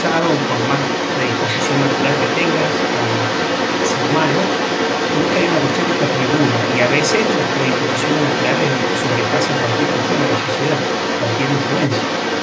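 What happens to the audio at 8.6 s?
At 8.6 s you're hearing the other side's voice leaking through, and it isn't a one-off: that second voice runs the whole clip, from 0 to 12.42 s, sitting at roughly the same level as the main talker. It's likely the far end playing over the talker's loudspeaker and getting back into the mic because the echo canceller didn't fully remove it. The call's mic processing still caps everything at 8 kHz.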